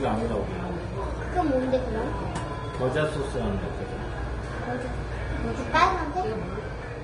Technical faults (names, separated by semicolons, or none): Vorbis compression